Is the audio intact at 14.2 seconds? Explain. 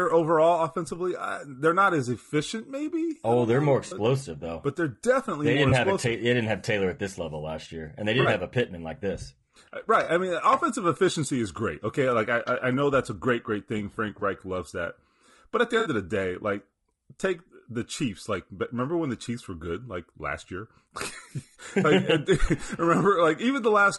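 No. Between 14.19 and 14.22 s a single AAC frame appears to have gone missing, and the decoder covered the roughly 20 ms gap by rebuilding it from the preceding good spectrum. This AAC frame loss with concealment comes through as a brief smeared, noisy, phasey blip in the speech. Running underneath it is low-delay AAC compression, likely AAC-ELD at a rate consistent with about 32 kbps. Its short frames resolve pitch harmonics poorly, so the speech sounds plainly rough and grainy, with noise between the harmonics and a synthetic-sounding top band.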